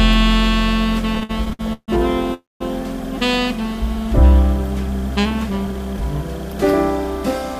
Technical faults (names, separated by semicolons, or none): repeated stalls (stutter); call audio freeze